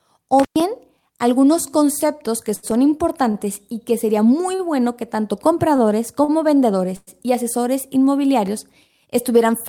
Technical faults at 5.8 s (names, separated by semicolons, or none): short stall from a late packet